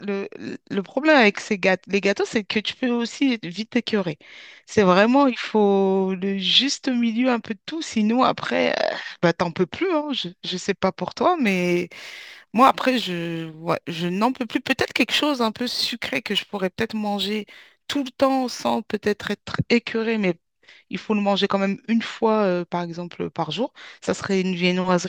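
From 11.47 s to 19.43 s the speech picks up a gritty, inharmonic fizz that rides on the louder and brighter syllables, sitting roughly 25 dB below the voice. This is crude rate conversion: samples were simply repeated to stretch the stream to a new rate, with no filtering. The pattern fits a 44.1 kHz to 48 kHz change. That repetition cycle produces tones unrelated to the voice, heard as buzz.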